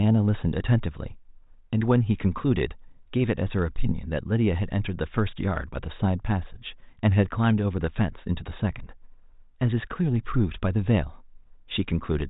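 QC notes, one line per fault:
No faults found.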